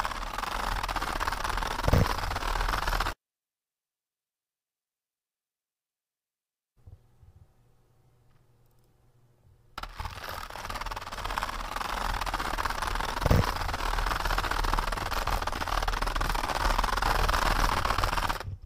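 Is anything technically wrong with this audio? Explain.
No, nothing technically wrong turns up here; it all sounds just as it should.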